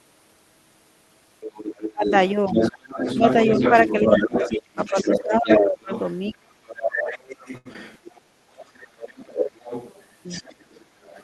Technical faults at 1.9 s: other side's voice leaking through; speech suppressed in double talk

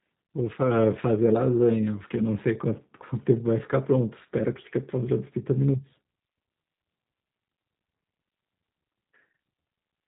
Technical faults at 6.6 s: G.729 codec

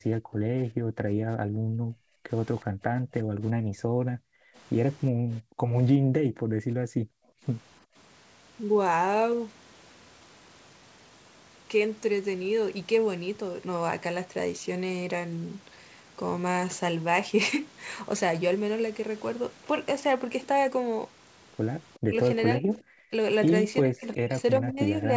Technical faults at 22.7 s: speech suppressed in double talk; echo leak

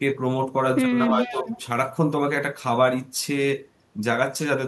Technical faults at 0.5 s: none

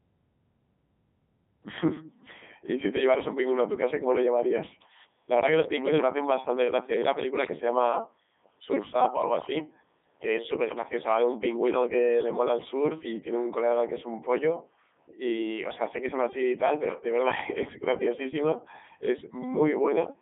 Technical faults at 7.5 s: Codec 2 vocoder; bit errors on digital voice radio

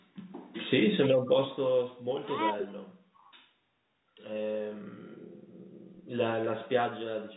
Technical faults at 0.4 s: none

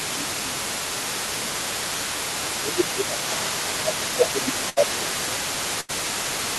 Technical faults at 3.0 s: other side's voice leaking through; speech suppressed in double talk

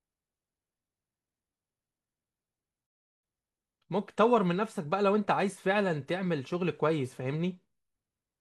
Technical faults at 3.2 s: digital broadcast dropout

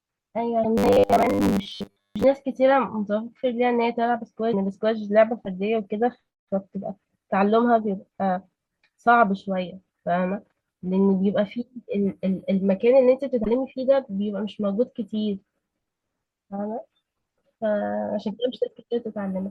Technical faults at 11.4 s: MP3 compression

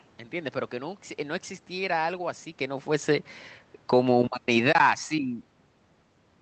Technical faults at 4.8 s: automatic gain falling

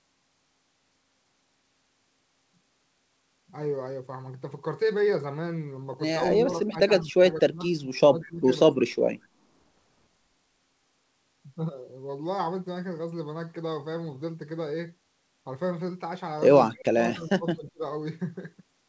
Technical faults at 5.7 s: none

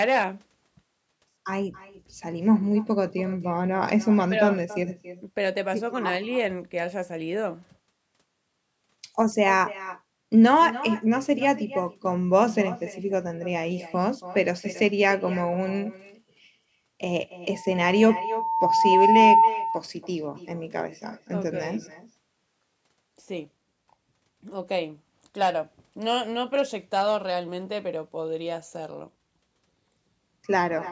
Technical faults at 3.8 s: echo with no canceller

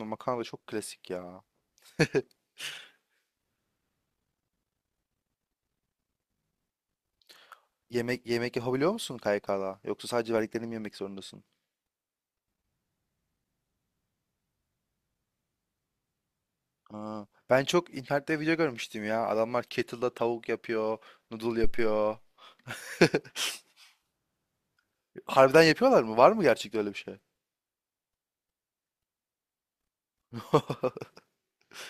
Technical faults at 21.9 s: phantom power thump

